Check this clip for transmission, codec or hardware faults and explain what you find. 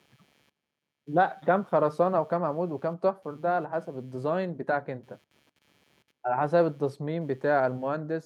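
One hardware fault runs through the whole speech clip: computer activity noise.

From start to finish, a faint buzzing chirp sits well under the speech, roughly 40 dB down, pulsing at something like 150 times a second. It rises and falls with its own rhythm rather than with the talking. That independence points to the computer: processor, graphics or mouse load shifting current through the ground shared with the audio circuit, so the machine's activity leaks in as interference.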